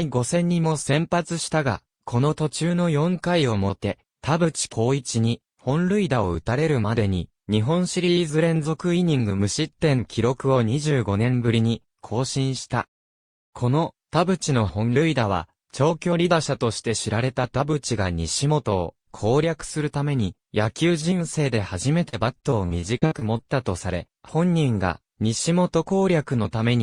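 From about 22.09 to 23.43 s there's a burst of repeated packet loss, the robotic-sound kind. Over that stretch, the stream keeps losing or receiving late short chunks, none longer than about 56 ms. Each hole gets papered over by stretching the last bit of sound, and then the next hole hits almost at once. About a fifth of that span is patched-in filler, so it comes across choppy, with pieces missing.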